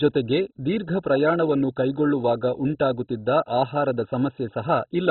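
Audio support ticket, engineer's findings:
MP2 compression, throughout: dull speech, nothing above 4.1 kHz, gurgling granular distortion. Likely very low-bitrate MPEG Layer II dropping upper sub-bands and coarsely quantising the rest.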